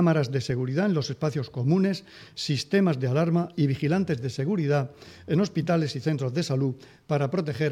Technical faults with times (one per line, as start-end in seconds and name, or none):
none